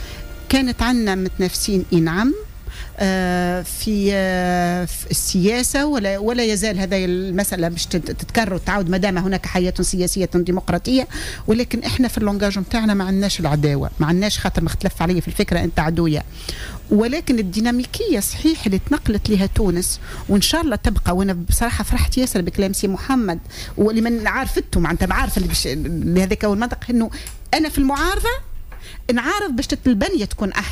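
A drift correction step runs from 12.23 to 14.03 s. For about 1.8 s the sound slows by 5.42% and sags 96.5 cents, nearly a semitone flat, then snaps back to pitch. The likely cause is clock-matching software briefly lowering the playback rate to rebalance its buffer.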